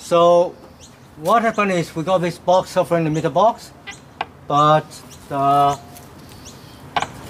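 From 5.73 to 6.19 s, a burst of processor overload crackle rides on the sound. The processor falls behind and misses a run of buffer deadlines. The buffers point to a length of under a millisecond each. About a handful fail in this stretch. Each miss repeats a sliver of old audio with hard edges. Those abrupt joins stack into a gritty, tearing crackle. It stops once the load eases at 6.19 s.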